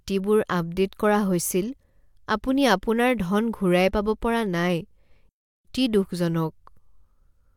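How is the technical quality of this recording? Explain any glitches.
The speech cuts out once, mid-flow. From 5.29 to 5.65 s a playback stall drops the output into silence for 356 ms before the speech continues, likely because the player ran short of data or its thread was briefly blocked.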